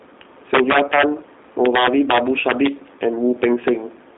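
G.729 codec artefacts run through the whole speech clip. The speech is rebuilt from a vocal-tract model and sparse pulses, a sound that fits 8 kbit/s G.729A, so it comes out plainly rough and synthetic. The band sits at roughly 250 Hz to 3.7 kHz, with nothing above 3.8 kHz.

Integer overflow strikes from 0.54 to 1.03 s and again from 1.66 to 2.67 s, each driven about 6 dB past the limit, then from 3.44 to 3.68 s at about 3 dB over. Peaks beyond the largest integer wrap to the opposite sign instead of limiting, producing violent cracks far harsher than clipping.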